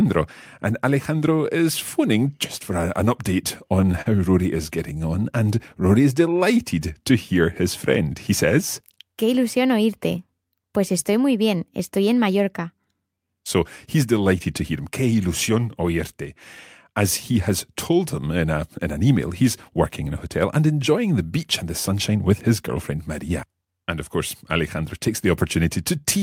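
Packets reached the receiver late or more slowly than playback consumed them in this speech recording. That produces repeated stalls (stutter) between 3.81 and 4.70 s. The jitter buffer ran dry five times. Each time, the receiver stretched the last sound to fill the hole, with the longest hold about 40 ms and 87 ms filled in total, roughly a tenth of that stretch. Nothing is actually lost, but the speech hitches and drags. Immediately after, from 4.93 to 5.93 s, a jitter buffer slow-down sets in. With the buffer running low or its target delay just raised, the receiver rebuilt its reserve by repeating single pitch periods and slivers of pause, adding 66 ms. Speech in that second plays at 94% speed with the pitch unchanged, so sounds come out slightly drawn out, just before "is delighted to".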